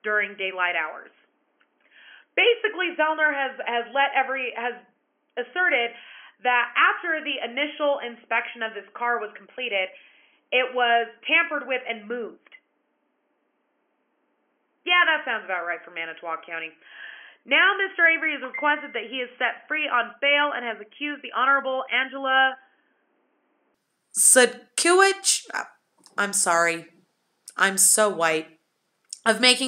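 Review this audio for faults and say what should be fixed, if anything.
From 0 to 23.74 s the audio is dull, with nothing above 3.3 kHz, roughly 10 dB quieter and carrying a faint extra noise floor, likely an input switched to a poorer device. Lock the recording input to the intended microphone and disable automatic device or headset-profile switching before recording.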